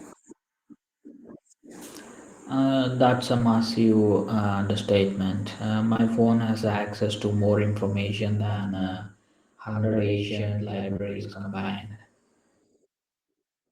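At 3.37 to 3.41 s and again from 5.93 to 6.01 s, short concealed packet loss fills roughly 20 ms gaps by extending the last sound, leaving a brief smear or wobble rather than a silent dropout or hard click, which is what distinguishes concealment from plain lost audio.

From 8.40 s to the end, channel delay (doubling) sets one channel 85 ms behind the other, which fits a 4096-sample buffer. Summed to mono, the late copy is a distinct equal-level slap. Unlike room reverb, it is a single repeat with no decaying tail.

A further concealed loss from 10.93 to 11.01 s smears through that doubled sound.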